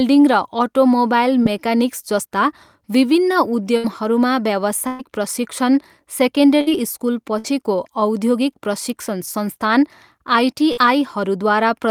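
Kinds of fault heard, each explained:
Short concealed packet loss: At about 1.43 s a few hundredths of a second of the call failed to arrive in time, roughly 20 ms of audio. The receiver bridged the hole by extending the sound just before it for about 18 ms, then blended back into the real signal. The result is a brief smear or wobble in the speech.
Burst of packet loss: Five times the call lost a longer run of audio in one go, at about 3.77, 4.87, 6.61, 7.39 and 10.72 s. Most gaps cover about 60 ms, while the one at 4.87 s covers about 120 ms. Each time the receiver kept the last sound going for roughly the missing span, fading it as the gap went on. Speech then resumes further on, with the lost part simply gone.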